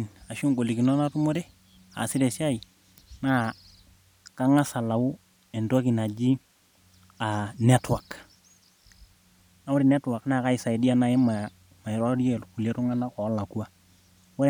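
Speech, with nothing technically wrong with it.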